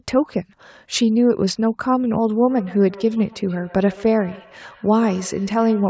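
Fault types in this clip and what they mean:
Feedback echo between two devices: Two devices on the same call share a room, so one loudspeaker replays what the other microphone sent and that microphone captures it again. Each device's echo canceller removes only its own playback, so the loop goes unchecked. From 2.42 s to the end, the speech returns roughly every 150 ms in thinning, ringing repeats, peaking about 21 dB below the direct speech.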